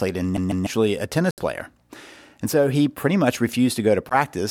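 CD stuck on one turn, 0.37 to 0.67 s: a scratch keeps knocking the laser back one track, so the same 0.15 s slice of speech plays twice over with a brief mute at each jump. The result is the quick, regular stutter of a skipping disc.

Bluetooth dropouts, 1.31 to 1.41 s and 4.09 to 4.15 s: audio packets likely reached the headphones too late and were discarded. This leaves sudden holes of about 70 ms and 14 ms, after which the speech resumes further along, as though it had kept playing.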